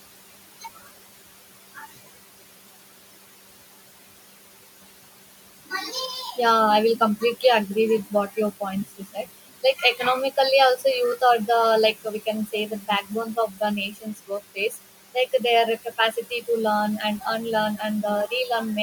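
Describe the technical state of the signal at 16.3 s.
At 16.3 s you're inside a stretch of speech cut by the noise suppressor, running from about 15.85 to 16.43 s, just before "to learn". The suppressor mistook some of the quieter speech there for background and pulled it down with the noise, by about 11 dB at the deepest point. Only something like 150 ms in all is affected, but it sounds swallowed and faint, as if those softer sounds dropped out for a moment.

Underneath that, the noise suppressor artifacts that run through the whole clip are also present at 16.3 s. The suppressor judges, frame by frame, which frequency bands hold steady noise and turns those down, cutting the room noise by about 17 dB. That makes the background sink in the gaps and come back up under the speech. The room noise itself sits about 15 dB below the speech.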